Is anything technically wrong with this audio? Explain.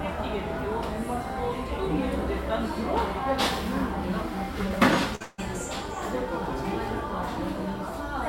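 Yes. At 5.15 to 5.22 s a brief smeared, held continuation of the preceding sound fades, then jumps ahead: a burst of packet loss, with about 40 ms of lost audio concealed by repeating the last sound.

From 5.22 to 5.40 s that fading continuation stretches on for about 160 ms before the audio resumes, skipping a further 160 ms. This is likely a long network dropout, with the receiver extending the last sound across the gap.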